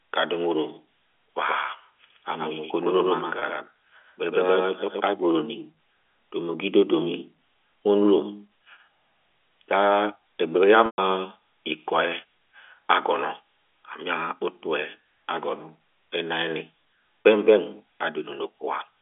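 A doubled audio track runs from 1.48 to 5.12 s. A second full-band copy trails about a tenth of a second behind, a few dB quieter, with no room colour, and it switches on and off abruptly. This is likely a slower capture path or a misaligned edit.

Packet loss with pitch repetition occurs at 3.39–3.42 s, 10.86–10.98 s and 17.24 s. The receiver filled each gap by repeating the last pitch period. The 30 ms losses sound like a brief buzzy hold. The 120 ms loss fades toward silence before the speech cross-fades back in over the narrow telephone band.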